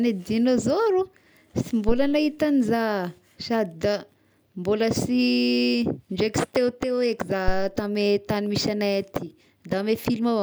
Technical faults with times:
1.89-2.23 phantom power thump
7.48-7.75 phantom power thump

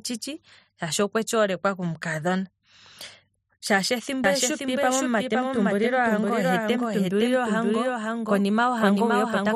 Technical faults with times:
4.24-9.55 doubled audio track

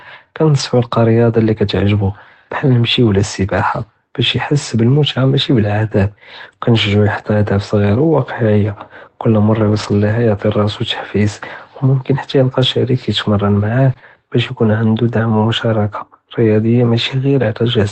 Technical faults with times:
0.59-0.61 lost packet rebuilt from error correction
1.43-1.49 lost packet rebuilt from error correction
9.59-9.93 lost packet rebuilt from error correction
13.93-13.97 short concealed packet loss
13.97 lost packet rebuilt from error correction

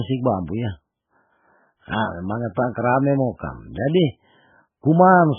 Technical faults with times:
0.00-5.38 MP3 compression

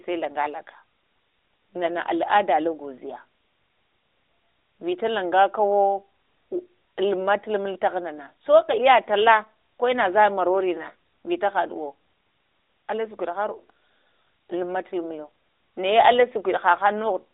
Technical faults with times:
none

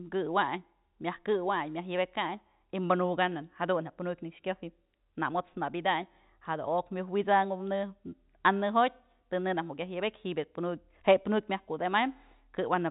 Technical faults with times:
none

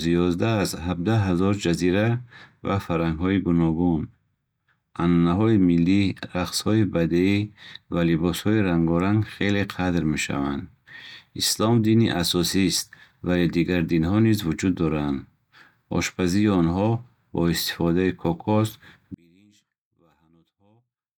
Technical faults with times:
19.14-21.18 one channel inverted

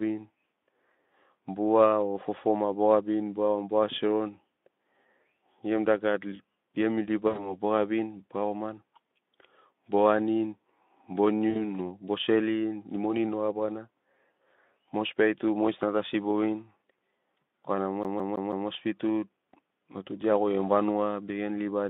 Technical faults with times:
7.27-7.56 VoIP packet loss concealed by the speech codec
11.50-11.71 VoIP packet loss concealed by the speech codec
18.03-18.68 CD stuck on one turn

